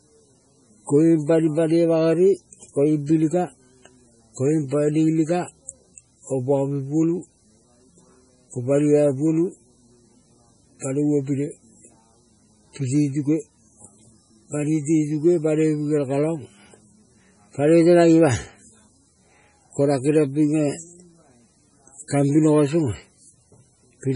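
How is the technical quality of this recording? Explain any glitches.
The recording is heavily degraded by what sounds like MP3 compression running for the whole clip. Starved of bits, likely at a low rate around 24 kbps, the encoder cuts everything above 10.5 kHz and drops weak frequency lines that flicker between frames, leaving the speech dull, watery and swirly, with metallic chirps on s sounds and smeared attacks.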